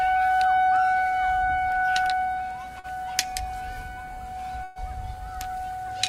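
An everyday-sound recording whose stream suffers two network dropouts. A short concealed packet loss near 2.79 to 2.87 s lost about 40 ms of audio, which the receiver patched by extending the preceding sound, leaving a brief smear. Later, a burst of packet loss from 4.64 to 4.79 s removed about 120 ms; concealment stretched and faded the last sound across the gap, then playback resumed further on with that stretch missing.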